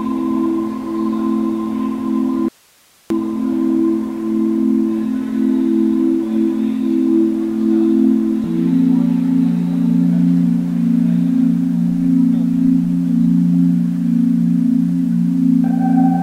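Audio dropout to a faint residue, 2.48 to 3.10 s: the sound cuts abruptly to faint hiss, likely the signal lost while the path stayed live.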